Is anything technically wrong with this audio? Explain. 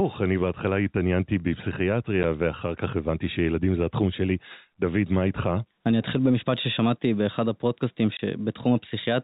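Yes, two faults are present in this speech clip.

Gain pumping runs throughout. The gain ducks under each loud syllable, a swing of around 5 dB, likely from gain set too high feeding a fast limiter. On a waveform, the peaks look flattened.

Packet loss filled with silence occurs twice: a 10 ms hole at 2.23 s, which fits one 10 ms packet, and a 20 ms hole from 8.17 to 8.19 s, fitting two. Each gap is a hard-edged dropout. On a spectrogram, these show as blank vertical strips cutting through the telephone band, which stops at 4 kHz.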